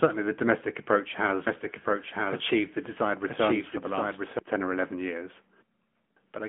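From start to finish, the AMR narrowband mobile codec rebuilds the speech from a vocal-tract model driven by sparse pulses. Nothing above 3.6 kHz survives, leaving a 200 Hz to 3.4 kHz phone band, and the plainly buzzy, synthetic edge fits a mode near 10.2 kbps.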